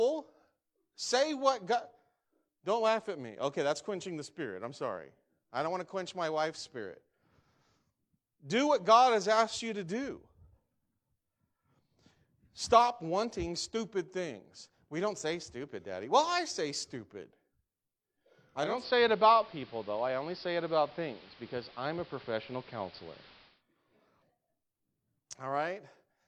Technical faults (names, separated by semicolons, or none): digital radio blending to analogue